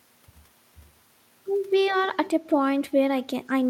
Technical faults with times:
2.14-2.28 echo leak

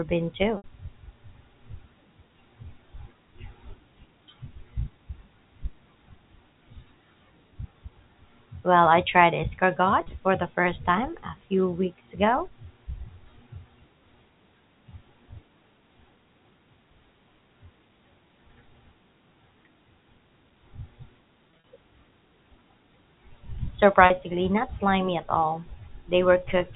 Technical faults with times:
0.57-0.64 packet loss with pitch repetition
10.01-10.09 packet loss with pitch repetition
21.51-21.62 packet loss with pitch repetition
24.06-24.10 packet loss with pitch repetition

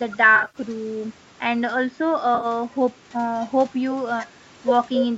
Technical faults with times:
0.35-0.58 AAC frame loss with concealment
2.35-2.46 AAC frame loss with concealment

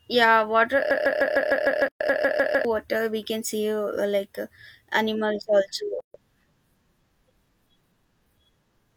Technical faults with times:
0.91-2.65 broken-record loop
1.88-2.00 gap at a join of encoded pieces
6.00-6.14 gap at a join of encoded pieces

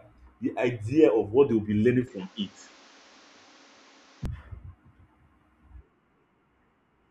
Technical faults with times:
2.08-4.25 input switched to a poorer device

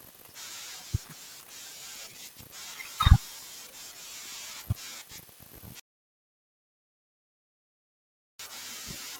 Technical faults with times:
5.80-8.39 audio dropout to silence

